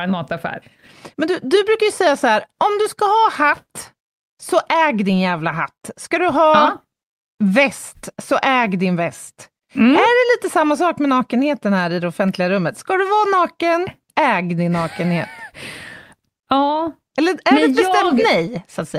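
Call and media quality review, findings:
Clock drift between sender and receiver: throughout the call, sender clock running around 4% fast versus receiver. Jitter buffer keeps overfilling, so the receiver has to trim audio to keep latency in check. Heard as an uneven, slightly rushed pacing in the speech.

Repeated timing corrections: 0.05 to 18.48 s, playout at 104%. Receiver jitter buffer repeatedly dropping short slices, all cuts and unevenly spaced, to track the fast sender. Shows up as small hiccups and wobbly tempo across the speech.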